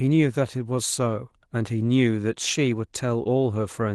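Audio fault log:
No faults heard anywhere in this speech clip.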